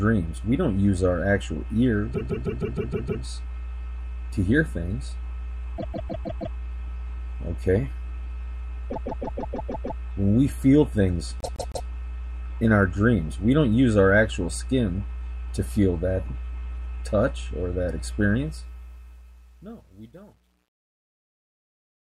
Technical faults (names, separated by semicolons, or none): mains hum; repeated frames; truncation distortion on a fade